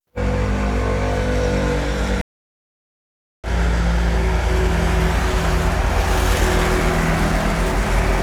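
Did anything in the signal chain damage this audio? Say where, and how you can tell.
Yes. A stream reconnect at the network and playback stage breaks the sound from 2.21 s to 3.48 s. The output drops to about 1.2 s of silence. When the sound returns, it has jumped ahead by roughly a second rather than picking up where it stopped. The connection dropped, the player went quiet while it reconnected, and then it started a new decoder in the middle of the stream, joining the live feed at a later point.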